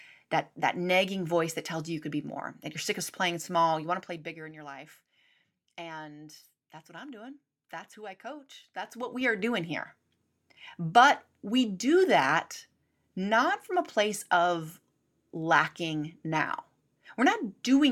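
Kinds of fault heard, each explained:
Zipper noise, 3.76–4.59 s and 8.58–9.47 s: the level falls, then rises, roughly 15 dB in unsmoothed steps of about 3 dB, each clicking audibly.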